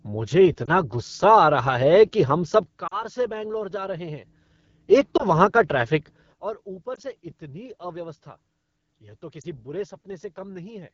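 Throughout, the speech carries the rough, raspy texture of the AMR wideband (HD Voice) codec at a low 8.85 kbit/s. The buzzy vocal tract coding is present at every moment, not in isolated bursts.

Lost AMR speech frames cause brief warbles at 0.65 s and 2.88 s (a longer 40 ms smear), at 5.17 s just before "वहाँ का ट्रैफ़िक", and at 6.96 s and 9.41 s. Each is a short, smeared, fading patch rather than a hard cut.

A sudden gain jump drops everything by about 12 dB at 2.63 s after "कि हम", returning at 4.26 s. Another drop of about 17 dB at 6.33 s, after "वहाँ का ट्रैफ़िक", lasts to the end. Speech and background shift together, likely from a gain setting applied without a ramp.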